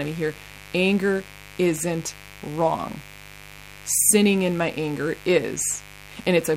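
From start to finish, mains buzz rides under the speech: switching spikes tied to a 50 Hz supply, arriving twice per cycle, leak into the signal path and spread harmonics up into the kilohertz range, giving a steady, raspy buzz roughly 20 dB below the speech.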